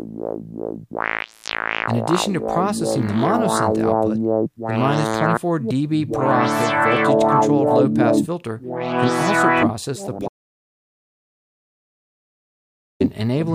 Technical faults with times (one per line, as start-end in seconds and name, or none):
10.28-13.00 audio dropout to silence